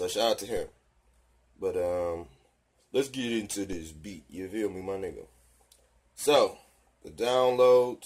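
The zero line of the signal jumps abruptly twice, a DC step of about -30 dBFS at 0.57 s and again at 3.73 s, each offset then draining away through a 5 Hz high-pass. Each jump lands as a brief low thump beneath the otherwise continuing sound.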